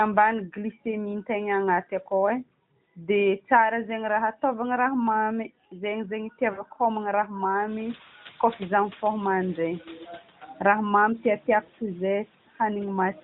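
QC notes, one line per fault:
6.52–6.65 s, lost AMR speech frames: the speech briefly stretches into a smeared, fading tone for about 60 ms, then returns weak or rough. That length fits three consecutive 20 ms frames failing their checks. The decoder kept repeating the last good pitch and vocal tract settings while turning the gain down, so the sound drew out and sagged before real frames resumed.
11.64–11.70 s, lost AMR speech frames: a shorter dip and warble of about 40 ms, consistent with two lost 20 ms frames. The same concealment reused the previous frame's settings at reduced level, which gives a brief held, wavering quality rather than a silent gap. The room noise is higher by this point.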